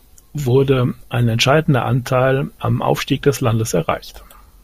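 No technical faults are audible.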